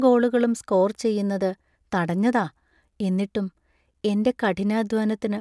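Nothing in the speech stood out as a technical problem on listening.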